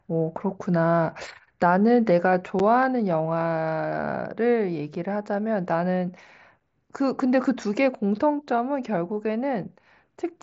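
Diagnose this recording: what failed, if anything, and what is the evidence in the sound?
Gap between chunks at 2.59 s and 6.60 s: two holes of about 7 ms, exactly 4.0 s apart. The storage or playback stage handled the speech in 4-second chunks and left silence at each join, interrupting the sound without losing any.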